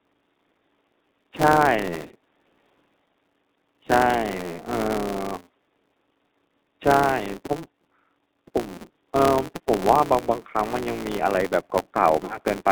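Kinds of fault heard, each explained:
G.729 codec: speech rebuilt by a low-rate model, consistent with 8 kbit/s G.729A, with plainly audible roughness and synthetic texture and nothing above 4 kHz.
Filter restarted on every block: the filter starts each block from silence, leaving a steady 172 Hz buzz that tracks the level, which fits a 256-sample block.
VoIP packet loss concealed by the speech codec: near 1.95, 8.74 and 12.25 s, gaps of 100, 80 and 40 ms are filled with decaying extrapolated sound.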